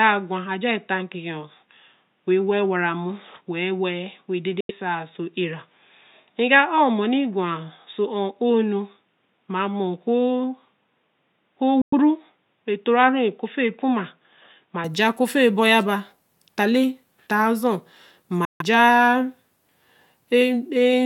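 From the start up to 14.84 s the speech is dull and boxy, with nothing above about 3.8 kHz, and the background noise sits very low, roughly 55 dB under the signal. At 14.84 s the top end opens up with no gap and no real jump in level. That's likely an input switched to a poorer device, such as a headset's call profile or a cheaper mic, whose narrow band and own noise floor colour the first part before the better input takes over.

Three holes cut right through the sound. The first runs from 4.61 to 4.71 s and lasts about 85 ms, the second from 11.82 to 11.94 s at about 107 ms, and the third, the longest, from 18.45 to 18.62 s at about 149 ms. Each time the speech picks up further along as if it had kept playing underneath. The likely cause is a Bluetooth dropout, with packets arriving too late for the headphones and the output going silent until good ones came through.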